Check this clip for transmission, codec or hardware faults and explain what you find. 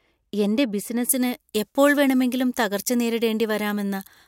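One fault is present: pre-emphasis left on, from 1.09 s to the end of the clip at 4.28 s. The treble was boosted for transmission, as with the standard 75-microsecond FM curve, but the matching de-emphasis cut was never applied afterwards. The result is a rising high-frequency tilt reaching about 14 dB more at 10 kHz than at 1 kHz. From 1.09 s the speech turns thin and harshly bright, with exaggerated sibilance.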